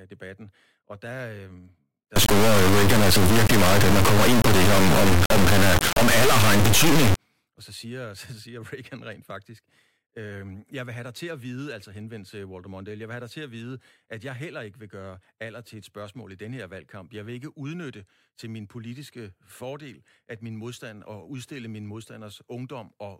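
From 2.16 s to 7.16 s the speech gives way to an integer read as float fault. The sample words appear to hold integers but are decoded as floating-point values. That fits 32-bit integer data read as 32-bit float. Most values land either near zero or far past full scale. The output slams between silence and the clipping limit. It sounds like a harsh, extremely loud square-wave buzz that cuts out in the quietest moments.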